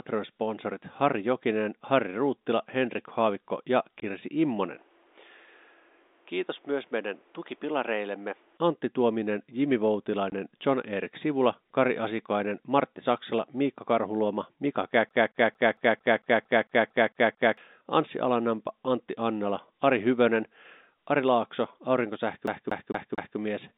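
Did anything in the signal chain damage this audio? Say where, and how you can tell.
Yes. At the network stage, packet loss filled with silence leaves 20 ms holes at 4.00 s and 10.30 s. Each gap has hard edges, which fits one lost packet apiece.

At the capture stage, from 4.76 to 8.57 s, the input was likely switched to a poorer device. Nothing above 3.8 kHz passes, the level drops about 5 dB, and new noise sits about 35 dB down.

At the storage or playback stage, the CD is stuck on one turn. A 0.23 s stretch repeats eleven times between 15.09 and 17.57 s, and four times between 22.47 and 23.38 s, with an even, skipping stutter.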